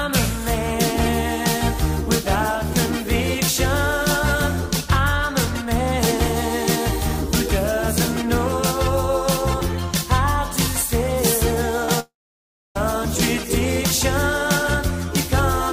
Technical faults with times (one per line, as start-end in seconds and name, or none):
11.85-11.90 short concealed packet loss
12.00-12.77 long network dropout